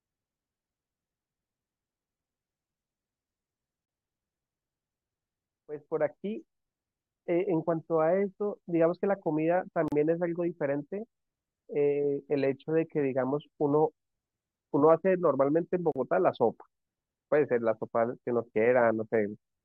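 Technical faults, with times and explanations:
3.85 to 3.88 s, 9.88 to 9.92 s and 15.92 to 15.96 s, gap at a join of encoded pieces: the speech drops out briefly, for 27.4 ms at the first join and 37.3 ms at the other two, recurring every 6.0 s, then resumes exactly where it stopped. The audio was encoded in separate 6-second pieces and joined untrimmed, so each piece's leading encoder delay and padded final frame remain as short silences with smeared edges.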